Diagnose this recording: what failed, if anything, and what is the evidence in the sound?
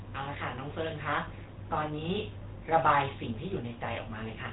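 Codec stage: the GSM full-rate codec, used throughout, rebuilt the speech from a pulse-driven vocal-tract model, leaving plainly buzzy, gravelly roughness and nothing above 3.8 kHz.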